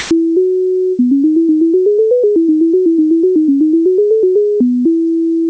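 Right at the start, from 0 to about 0.11 s, you get comfort noise in place of the background: the sender's discontinuous transmission likely kicked in, so the receiver filled that stretch with flat, featureless synthetic hiss at a level about 40 dB different, before the real audio arrives, band-limited to 8 kHz by the call codec.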